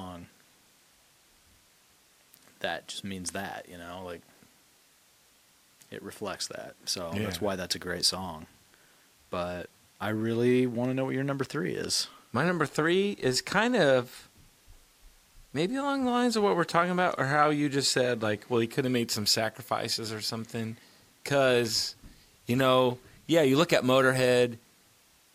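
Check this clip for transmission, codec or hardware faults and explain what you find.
I found no faults in this clip, so there is nothing to explain.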